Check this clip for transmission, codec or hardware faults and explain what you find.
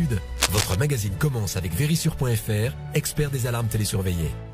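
One hardware fault is audible. Between 0.36 and 0.76 s, a burst of cable scratch noise sits over the sound. It is dense and uneven, a scratching, rustling texture lasting about 0.4 s. It reaches roughly the same level as the sound itself. The likely cause is a worn cable, connector or control being moved. Its contact resistance then fluctuates rapidly, and those fluctuations ride on the signal as noise.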